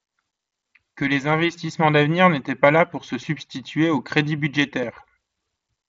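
No technical faults can be heard anywhere in this speech clip. The sound carries the light grain of the Bluetooth mSBC headset codec, and nothing reaches above 7.8 kHz, the ceiling of that wideband link.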